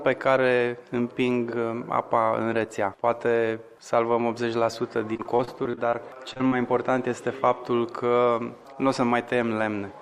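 From 5.13 to 6.53 s, repeated packet loss (robotic sound) gives about a dozen gaps up to 38 ms, patched by repeating sound. Spectrograms show frozen, smeared slices; the result sounds choppy.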